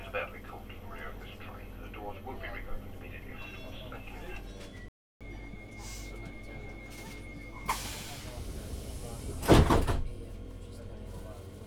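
Playback stall at 4.88 s: the sound cuts to silence for about 0.32 s, most likely because the player's buffer ran dry or its thread was blocked, then resumes. Catch-up at higher speed from 5.21 to 8.21 s: the player works through its backlog at 1.1 times normal speed, raising the pitch by about a semitone and a half, before settling back to normal.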